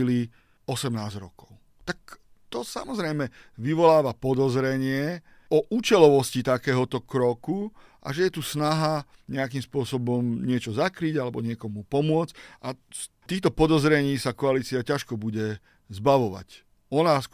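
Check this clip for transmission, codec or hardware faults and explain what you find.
No faults are audible here.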